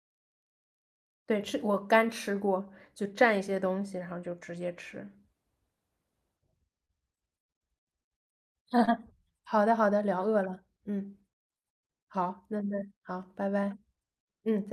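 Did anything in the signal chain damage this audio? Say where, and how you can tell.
Yes. Two brief smears break the speech, from 6.85 to 6.91 s and from 8.85 to 8.89 s, each a short wobble where the sound is stretched rather than cut. This is short concealed packet loss at the network stage. About 40 ms and then 20 ms of audio arrived too late for the decoder, which bridged each gap by extending the preceding sound for roughly 35 and 22 ms before easing back into the real signal.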